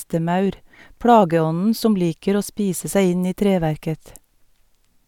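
No technical faults are audible.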